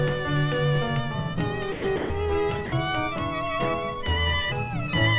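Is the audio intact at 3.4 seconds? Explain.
Yes, the audio is intact at 3.4 seconds, with no dropout, click or distortion there beyond the narrowband call-codec sound that has nothing above 4 kHz.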